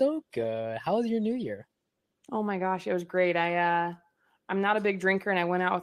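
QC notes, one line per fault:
0.41–2.87 s, call bitrate drop: the speech turns coarser and watery, consistent with the call's bandwidth estimate falling and the encoder cutting from roughly 32 to 17 kbps, spending fewer bits per frame, until quality returns just before "it was great I".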